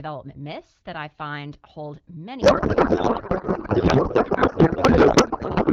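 A codec payload misread begins at 2.41 s and runs to the end. Up to that point the AMR wideband coding sounds clean, which fits a rate of about 12.65 kbit/s. From 2.41 s the speech collapses into garbled noise and warble that barely tracks it. This happens because the decoder reads octet-aligned AMR frames as if they were bandwidth-efficient, so every field is taken from the wrong bit positions.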